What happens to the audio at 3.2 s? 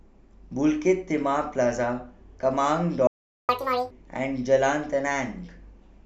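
The speech cuts off abruptly and the output goes silent from 3.07 to 3.49 s, a gap of about 0.42 s, before carrying on. This is a playback stall, likely the player running short of data or its thread being blocked until it recovered.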